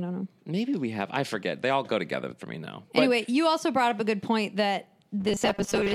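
From 5.20 to 5.95 s, robotic sound from repeated short buffers turns the speech into a rigid metallic buzz. This is likely a 5 ms segment replayed for most of the span, showing as a repeating waveform and steady 200 Hz harmonics on a spectrogram.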